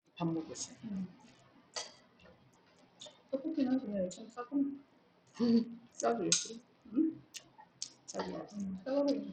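A noise suppressor applied to music or sounds runs through the whole clip. Built for speech, it treats sustained tones and ambience as noise, so the level pumps and tails thin out, with gain swinging by around 20 dB as it reacts.

The treble is dull and flickers, and a gritty, aliased haze sits on the audio. This is likely Bluetooth SBC compression, with the heavy damage fitting a starved bit pool near 64 kbps, where the upper sub-bands lose their bits and everything else is coarsely quantised.

Sound cut by the noise suppressor shows up as distinct dips at 1.13–1.75 s, 1.93–3.32 s, 4.82–5.37 s, 5.80–5.98 s, 6.61–6.90 s and 7.22–8.09 s. Each drop reaches about 11 to 13 dB. Held or decaying material sinks while onsets survive, so the decays end early.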